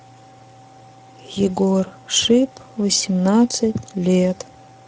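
Speex codec damage runs throughout, from the first moment to the last. This CELP speech codec rebuilds each short stretch of speech from a predicted spectral envelope plus a coded excitation signal. Here there are too few bits to capture that excitation faithfully, and the speech comes out plainly degraded, with a grainy, hoarse roughness laid over it. The degree of damage points to a middle quality setting, around 17 kbps.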